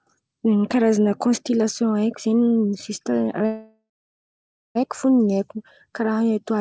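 A speech recording carried over a call link, where packets were likely held up in transit long enough for the jitter buffer to run dry, producing a call audio freeze from 3.46 s to 4.77 s. The receiver stretched the last sound into a fading buzz or hiss, then about 0.88 s of silence. When delivery resumed, speech continued where it stopped with nothing lost, now running about 1.3 s late. The band ends at 8 kHz, consistent with G.722.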